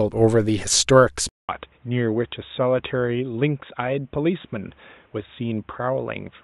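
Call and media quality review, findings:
Input likely switched to a poorer device at 1.29 s, through to end of clip. Switch leaves a 200 ms gap in the speech. New path has nothing above 3.8 kHz, so the speech turns dull and boxy, a few dB quieter, over a fresh, faint noise floor roughly 40 dB down.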